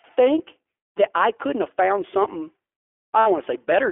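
Throughout, the speech carries the iLBC codec's narrowband sound. Everything above 3.4 kHz and below 300 Hz is gone, leaving a hard-edged band on a spectrogram. Each 20 ms frame's excitation is coded independently, which fits the 15.2 kbps mode, giving a plainly audible rough, synthetic edge.

From 3.20 to 3.27 s, 60 ms of lost iLBC frames are concealed by repeating the last pitch cycle with added noise. This produces a brief held, buzzy vowel that appears as evenly repeating cycles in the waveform and flat, smeared harmonics on the spectrogram before the speech recovers almost immediately.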